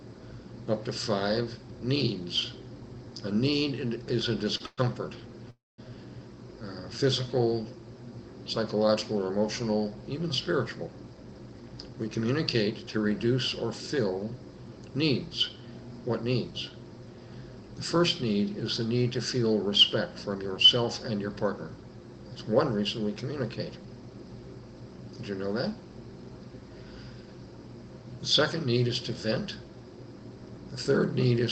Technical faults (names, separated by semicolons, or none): short stall from a late packet; call audio freeze; jitter buffer speed-up